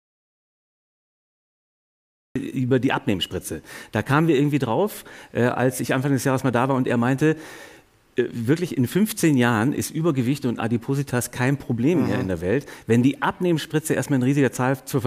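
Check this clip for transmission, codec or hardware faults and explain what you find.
One fault stands out: an audio dropout to silence. From the very first moment until 2.36 s the clip holds silence, most likely because the input was disconnected or muted while recording continued. Unlike a noise gate or a quiet passage, no room tone survives, and the sound enters abruptly, already in mid-flow.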